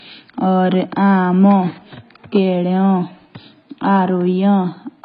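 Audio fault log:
Throughout: AAC compression. The speech sounds dull and smeared, nothing above about 5 kHz, with a warbling, fizzy texture on sibilants and held sounds. This is likely heavy low-bitrate AAC-LC coding, near 16 kbps, which lowers the cut-off and quantises bands coarsely, leaving spectral holes.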